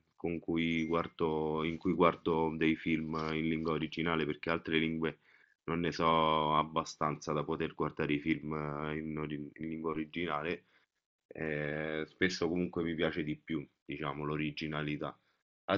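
Nothing stood out on listening to this speech, which comes through the Bluetooth mSBC headset codec with its band ending near 7.6 kHz.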